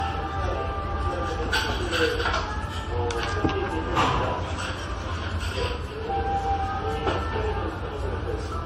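From start to finish the everyday sound has a swirly, watery smear and a hollow, phasey colour, with transients softened so that sharp onsets blur. Nothing is present above 16.5 kHz. This points to generation loss: the audio was likely decoded and re-encoded around seven times with AAC-LC, each pass at a modest rate near 64 to 73 kbit/s, and each time quantising on a shifted frame grid, so the noise and spectral gaps piled up.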